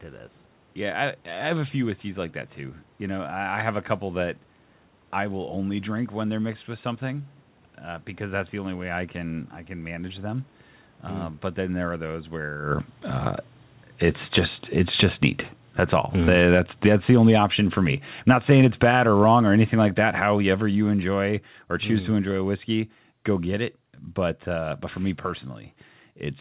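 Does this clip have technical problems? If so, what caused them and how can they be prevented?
Yes. From 14.03 s to 22.4 s the speech sinks steadily until it is about 18 dB quieter just before "whiskey go get it", and the room noise sinks with it. This is automatic gain falling: the gain control judged the input too loud or its background noise too strong and gradually lowered its gain. Setting a moderate microphone input level before the call, so the automatic gain control never sees an overly loud signal, would prevent it.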